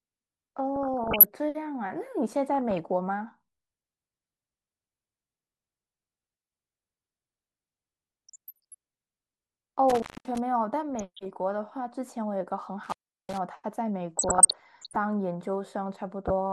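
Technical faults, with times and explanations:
Throughout, MP2 compression: the speech sounds dull and plainly gurgling, with a grainy texture and the top end thinning and flickering as upper sub-bands drop in and out. This is likely low-bitrate MPEG Layer II coding, consistent with about 80 kbps, where too few bits force whole high bands off and coarsely quantise the rest. Unlike the burbling bursts, this coloration is steady across the whole clip rather than arriving in short episodes.
0.76–1.30 s, 8.29–8.75 s, 10.95–11.19 s, 14.19–14.96 s and 16.25–16.31 s, DAB burbling: short bursts of burbling sit over the speech, with short blips of noise in single frequency bands. Bit errors that got past error correction have corrupted the compressed frames, so wrong samples put blips of noise into single sub-bands, and where scale-factor errors get through, sub-bands jump in level for up to a frame. 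Unlike a dropout, the sound never goes silent; it is garbled while still present.
6.27–6.61 s, 9.90–10.38 s and 12.84–13.38 s, intermittent contact: the sound cuts out abruptly, with crackle at the moment of breaking and again on reconnection. The gaps last about 162 ms, 229 ms and 369 ms, and faint hiss remains while the line is open. This is a loose plug or cable contact briefly opening. It differs from the burbling because the programme actually disappears, framed by crackles, rather than being garbled while still present.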